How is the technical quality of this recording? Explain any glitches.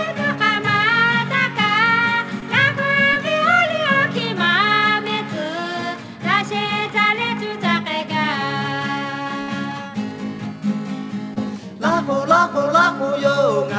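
The recording came through a call link, likely G.722 at 64 kbps, with nothing above 8 kHz, and it has four packet-loss glitches.

Short concealed packet loss occurs at 2.40–2.43 s, 3.13–3.17 s and 11.34–11.38 s. In each, about 20 ms never arrived, and the decoder extended the preceding sound to cover it. This is heard as a brief smear or wobble.

A burst of packet loss at 9.41–9.50 s drops about 60 ms, roughly three 20 ms packets. Concealment holds and fades the last sound into a buzz or hiss, then the audio resumes with that stretch missing.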